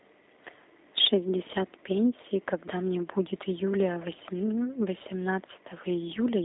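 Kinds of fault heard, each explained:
G.729 codec: The speech has passed through a low-rate speech codec that fits G.729 at about 8 kbit/s, which rebuilds each 10 ms frame from a vocal tract model, a pitch predictor and a few pulses. The line band runs from about 250 Hz to 3.7 kHz, with nothing above 3.8 kHz, so the speech sounds narrow and muffled. The coding damage is plainly audible as a rough, slightly synthetic texture.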